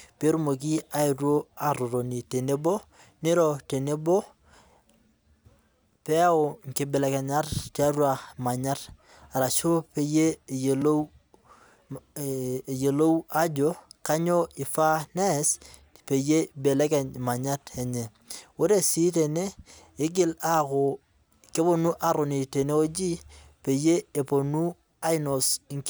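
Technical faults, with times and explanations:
0.78 s and 10.82 s, block of digital silence: the speech drops abruptly to zero for 1.25 ms, then 2.9 ms just after "tiatua manyat arashu peyie", which fits an unfilled 128-sample buffer. The hard edges tick. The waveform shows flat gaps, and the spectrogram shows thin broadband vertical streaks.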